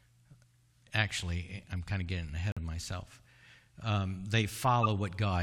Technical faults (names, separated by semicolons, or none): corrupt frame muted; corrupt frame decoded